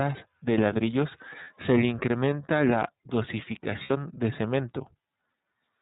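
Throughout, the speech sounds band-limited and slightly synthetic, typical of the iLBC codec: nothing passes above 4 kHz, and the roughness fits its 13.33 kbps, 30 ms mode rather than simple low-pass filtering. At 1.44 to 1.48 s, between "de ladrillos" and "se le incrementa la", and again at 3.83 to 3.90 s, lost iLBC frames leave a brief, held buzzy vowel. These last about 30 ms and 60 ms, fitting one and two lost frames. Unlike a dropout, the gap is filled with a held sound rather than silence, and clarity returns immediately afterwards.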